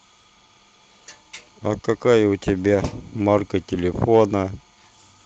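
Listening closely to the speech, nothing stood out as a technical fault at any point.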